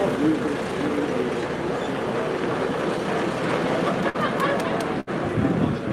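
Around 4.09 s there's a burst of packet loss running to about 4.17 s. The receiver had nothing new to play, so it stretched the last bit of sound for roughly 48 ms, fading it down as it went. When the audio picks up again, about 40 ms of the original is simply gone, so it skips forward slightly.

Tucked inside that same stretch, from about 4.14 to 4.16 s, is a lost packet rebuilt from error correction. The following packet carried a low-bitrate backup copy, so the decoder filled those 20 ms with the copy rather than leaving a hole. It lands audibly rougher and grainier than the material around it.

A second burst of packet loss hits at about 5.00 s and lasts until roughly 5.10 s. It's the same concealment pattern but a bit longer: about 66 ms of held, decaying sound, then playback resumes with around 60 ms missing.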